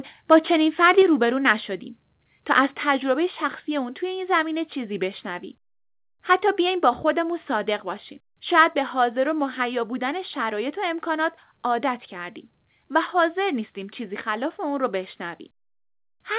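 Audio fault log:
0.32–0.37 s and 8.58–8.62 s: microphone overload. The loudest peaks are squared off and give a harsh crackle on those syllables, stronger in the first burst. The level runs about 3 dB, then about 2 dB, past the converter's limit, likely from input gain set too high for the converter.
1.02 s, 3.12 s, 6.66 s: microphone volume stepped down. Voice and background drop together in single abrupt steps, about 4 dB first and then about 1 dB twice, beginning soon after the first distorted peak. This is likely the call software cutting the device's input gain to stop clipping.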